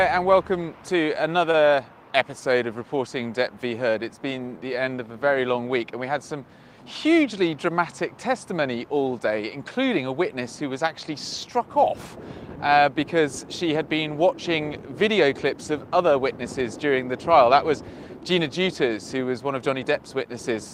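At 1.51 to 1.57 s the sound briefly holds with a slight buzz or dip: a short stall from a late packet, with about 24 ms stretched while the jitter buffer sat empty.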